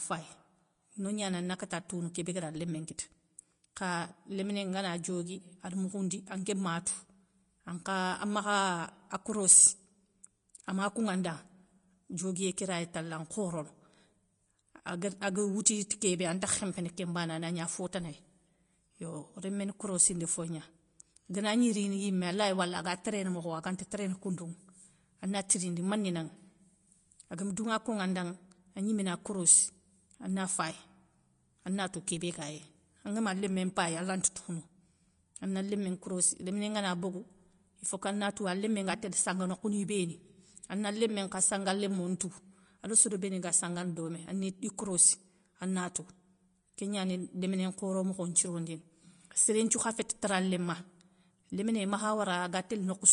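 From start to finish, the speech has plainly audible damage, likely from Vorbis compression at a low bitrate, around 35 kbps. Nothing remains above 10.5 kHz. The treble is quantised so coarsely that its detail turns to hiss. Tones sound grainy and attacks blur.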